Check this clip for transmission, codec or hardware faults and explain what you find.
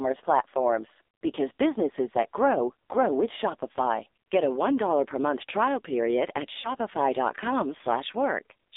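Two faults are present: heavy narrowband mobile codec damage throughout, and one lost AMR speech frame.

Throughout, AMR narrowband mobile codec: a low-rate pitch-and-pulse vocal tract model, consistent with about 5.9 kbps, makes the speech heavily buzzy and synthetic. The spectrogram shows energy confined to roughly 300 Hz to 3.7 kHz.

From 6.62 to 6.72 s, lost AMR speech frames: consistent with a single lost 20 ms frame, the decoder repeats the last pitch and tract settings at falling gain. The waveform shows a brief dip or warble.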